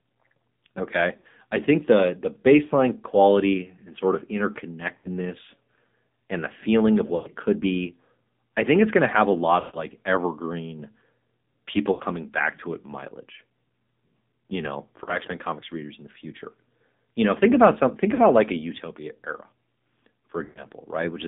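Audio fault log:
throughout: AMR narrowband mobile codec; audio is confined to roughly 150 Hz to 3.7 kHz with a buzzy, synthetic texture, which fits the low 7.4 kbps mode rather than simple band-limiting.
1.18–1.27, 4.98–5.08, 7.16–7.29, 9.60–9.84, 11.92–12.03, 15.04–15.18, 18.14–18.23, 20.44–20.66 s: lost AMR speech frames; each gap of 40 to 140 ms, such as the one just before "could be I think", is smeared and fading rather than a hard silent dropout, because the decoder repeats the last pitch at falling gain.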